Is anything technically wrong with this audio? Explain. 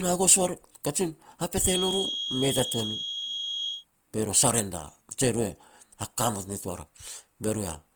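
Yes. Throughout the speech, tones sound grainy, rough and plainly noisy rather than smeared, while the spectrum still reaches about 20 kHz. This is likely Opus compression in its music (CELT) mode, filling starved bands with folded or noise content, at a rate that fits about 24 kbps.

From 1.59 to 3.85 s a thin, steady whistle at 3.3 kHz sits only a few decibels below the speech, swelling and fading slowly in level. This is likely a feedback whistle: the loudspeaker-to-microphone loop hovers at the edge of feedback, sustaining one frequency without running away.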